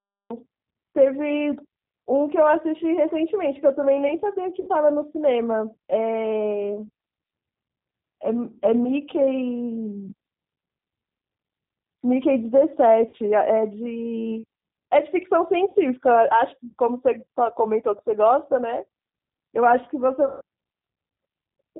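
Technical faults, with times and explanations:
throughout G.729 codec: Nothing above 4 kHz survives, and the sound is plainly rough and synthetic. That fits 8 kbit/s G.729A rebuilding speech from a filter and pulses.
0.00–0.30 s cut-off start: Digital silence gives way abruptly at 0.30 s to sound already under way. There is no natural attack, because the recording began late.
4.61, 13.09, 15.69 and 20.27 s VoIP packet loss concealed by the speech codec: Gaps of 60, 40, 60 and 140 ms are filled with fading, buzzy extrapolated sound. The longest gap fits seven lost 20 ms packets.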